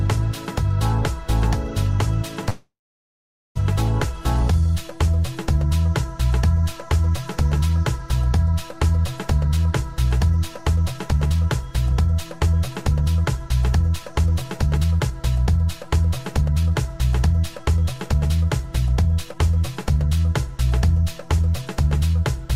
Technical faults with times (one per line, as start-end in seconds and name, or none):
2.49-3.57 call audio freeze
4.42-4.68 jitter buffer slow-down
10.21-11.47 jitter buffer speed-up
11.91-15.11 jitter buffer speed-up
15.57-19.35 jitter buffer speed-up